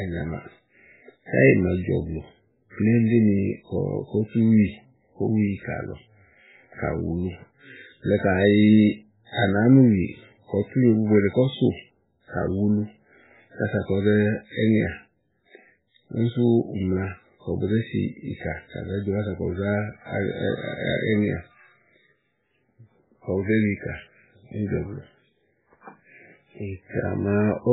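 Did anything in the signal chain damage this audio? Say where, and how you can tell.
Yes. Throughout the speech, nothing reaches above 3.8 kHz, and what remains sounds watery and swirly, with heavily smeared onsets. This is likely MP3 compression at the codec stage, starved of bits at a rate that points to about 8 kbps. The encoder chops the treble at a fixed frequency and zeroes weak spectral lines that flicker between frames. That flicker separates it from a plain low-pass filter or narrowband phone line, which would dull the top without the swirl.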